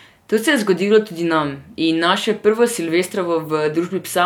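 No technical faults can be heard anywhere in the recording. There is nothing here that calls for a time-by-time account.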